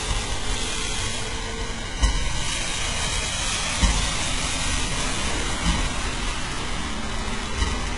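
From start to finish, the treble has a synthetic quality. Nothing is present above about 11.1 kHz. Below that limit, the top end sounds bright but false, with a gritty, metallic sheen. The damage is heavy throughout. This is likely HE-AAC compression at a very low bitrate, consistent with about 12 kbps. Only the lower spectrum is truly coded. The upper bands are copied up from below and shaped coarsely, so their harmonics fail to line up with the real sound.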